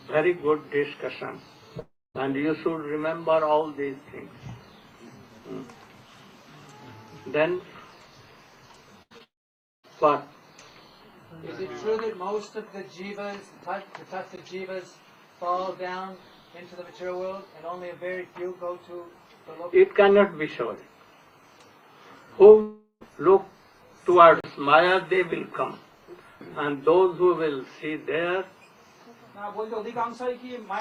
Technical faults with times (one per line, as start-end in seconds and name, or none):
1.79-2.16 long network dropout
9.02-9.12 burst of packet loss
9.18-9.21 short concealed packet loss
9.23-9.85 long network dropout
14.36 block of digital silence
22.61-23.03 long network dropout
24.40-24.44 block of digital silence